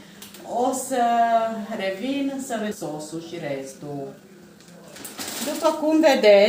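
A skip ahead occurs at 2.71 to 2.73 s. Roughly a second of audio never plays: it was lost in transit or discarded when the jitter buffer overflowed. Playback jumps straight to later sound with no fill, so the two sides butt together abruptly.

Jitter buffer speed-up follows from 2.75 to 5.15 s. With too much audio queued, the receiver repeatedly cuts short pitch-period-sized pieces, playing about 18% fast and shedding around four tenths of a second. The sound hurries while pitch stays unchanged. A milder pass at 5.58 to 6.31 s runs about 4% fast, trimming a few tens of milliseconds.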